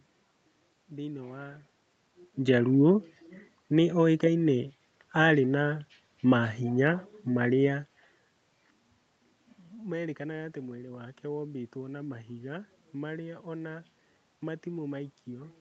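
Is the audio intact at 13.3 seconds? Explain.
Yes, the audio is intact at 13.3 seconds, with no fault at that moment.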